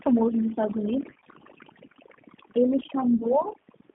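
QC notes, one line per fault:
Throughout: overdone noise removal. The background between phrases drops and breaks up into twinkling specks. A noise reduction stage was pushed too hard, so any frequency band sitting close to its noise estimate was pulled far down or switched off, taking the quieter components of the speech with it and leaving isolated bands flickering on and off.
Throughout: G.729 codec, here the G.729A variant at 8 kbit/s on a 200 Hz to 3.4 kHz line. The speech is intelligible but plainly rough and slightly synthetic, with no highs and a thin low end. At this rate the decoder rebuilds speech from a vocal tract filter, a pitch predictor and a few pulses per sub-frame rather than the waveform itself, so fine detail is replaced by a modelled approximation.
1.10 to 1.30 s: VoIP packet loss concealed by the speech codec. A short stretch turns stretched and smeared, with the speech briefly weakened and uneven before it firms up again. 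About 80 ms of audio went missing in short gaps of up to 20 ms scattered over roughly 160 ms; the decoder filled each gap by extending its last pitch and filter with falling gain, and since every frame builds on the one before, the damage lingers past the gaps.
3.16 to 3.26 s: VoIP packet loss concealed by the speech codec. A brief stretched smear appears and fades, followed by a moment of weak or distorted speech. Here 40 ms went missing, and the decoder papered over it by repeating its last pitch and vocal tract shape at decreasing level, then needed a little time to recover its state once real data resumed.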